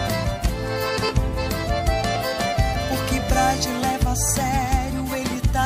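From 1.09 s to 5.36 s a click or pop recurs at a steady interval of 1.07 s, about five in all. The even spacing points to clock drift buffer slips, likely from two devices running on separate clocks about 700 ppm apart: the buffer between them drifts until a short block, a few dozen samples, is dropped or repeated. Unlike random dropouts or packet loss, these ticks never vary in spacing.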